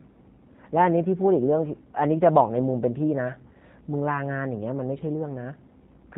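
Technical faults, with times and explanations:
Throughout, G.729 codec: the speech is squeezed to 8 kbit/s, rebuilt from a vocal tract filter, a pitch predictor and a few pulses per frame, so nothing above 4 kHz survives and the voice comes out dull, plainly rough and a bit synthetic.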